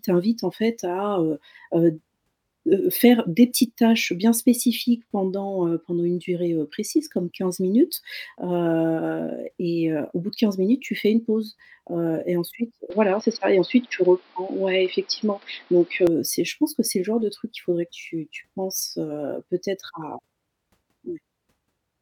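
Speech, dull from 12.90 to 16.07 s, likely the input switched to a poorer device: the spectrogram goes empty above 5.6 kHz and gains a faint noise floor, and the waveform steps about 5 dB.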